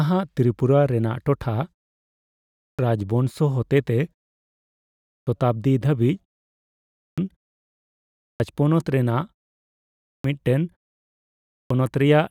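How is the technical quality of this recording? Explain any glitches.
The recording has a recurring clipped start after a pause, six times: at 2.17 to 2.79 s, 4.65 to 5.27 s, 6.62 to 7.18 s, 7.75 to 8.40 s, 9.66 to 10.24 s and 11.11 to 11.70 s. Each follows a gap of 0.40 to 0.59 s, during which the output device sleeps. It then needs 0.56 to 0.65 s to wake and lock, so that much of the returning speech is lost, and each phrase starts abruptly without its first sounds. The muting in the pauses themselves is expected.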